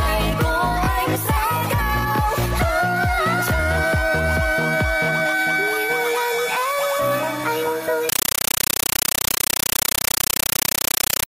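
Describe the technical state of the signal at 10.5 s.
At 10.5 s a compressed stream is being played as audio, from 8.09 s to the end: Dolby Digital data treated as samples. The result is loud static chattering in 9.33 ms bursts 31.25 times a second, a rhythm that sets it apart from steady noise.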